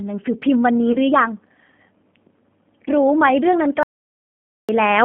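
G.729 coding runs through the whole speech clip. The sound is confined to a narrow telephone band of roughly 150 Hz to 3.5 kHz and has a plainly rough, synthetic texture, which fits an 8 kbit/s codec rebuilding the voice from a filter, a pitch estimate and a few pulses per frame. Packet loss concealed by the speech codec appears from 0.92 to 0.96 s. About 20 ms of audio, consistent with a single lost packet, is replaced by the decoder's guess, extended from the previous pitch and filter at falling gain, and the voice is briefly stretched into a fading tone or noise before it recovers. A dropout to silence follows from 3.83 to 4.69 s. For about 0.86 s the signal falls to silence with no room tone at all, and the sound resumes abruptly. The likely cause is a lost input or link while the recorder kept writing empty samples, so whatever was spoken in that gap is gone.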